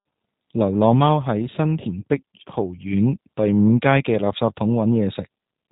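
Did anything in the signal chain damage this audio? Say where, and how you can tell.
Yes, G.729 codec damage throughout at the codec stage: the speech sounds rough and synthetic, fitting an 8 kbit/s model-based coder, and a spectrogram shows nothing above 3.8 kHz.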